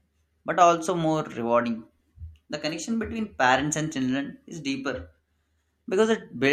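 Speech recording, with no technical faults to be heard.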